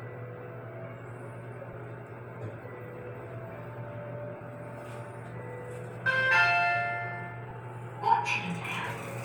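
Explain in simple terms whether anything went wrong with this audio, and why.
Three brief hiccups break up the sound: a tiny blip at 1.73 s, a short hazy smear from 4.36 to 4.41 s (about 45 ms), and another from 7.49 to 7.52 s. These are lost LE Audio frames. Pieces of the Bluetooth stream never arrived, and the receiver filled each gap with a noisy copy of the sound just before it.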